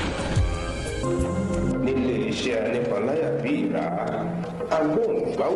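At 3.94 s a call bitrate drop sets in and lasts to the end of the clip at about 5.55 s. The encoder is starved of bits, so it quantises more coarsely and trims the upper frequencies. The audio turns rough and watery, with a duller top, which fits a fall from 48 kbps to 18 kbps. Unlike packet loss, nothing drops out or glitches. The degradation is continuous and holds steady for the last 1.6 s.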